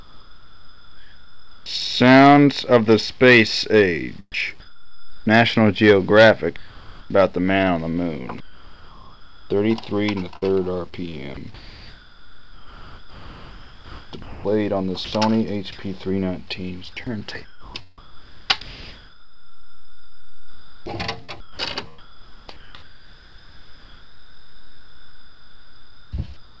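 From 0 to 1.66 s, comfort noise in place of the background: a steady, featureless hiss about 2 dB quieter stands in for the real background, likely because transmission paused during silence. Unlike chopping, it stays uniform throughout.

From 4.54 to 15.13 s the sound is chopped by the voice detector, likely switching repeatedly. About 5.2 s of edges and quiet passages become synthetic noise.

From 17.45 to 18.61 s, and again from 21.25 s to the end, the background is once more swapped for smooth comfort noise, covering about 0.8 s and 4.4 s respectively.

At 21.25 to 21.30 s, a short concealed packet loss: about 40 ms went missing and was filled by extending the preceding sound, giving a brief smear or wobble rather than a noise bed.

The whole clip has nothing above 8 kHz, which fits a G.722 call path at 64 kbps.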